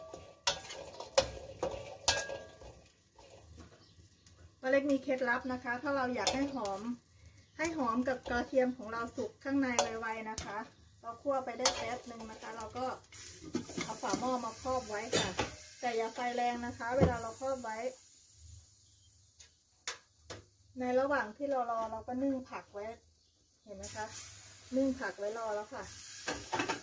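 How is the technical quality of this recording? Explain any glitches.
The technical quality of this recording is sound, with no glitches to explain.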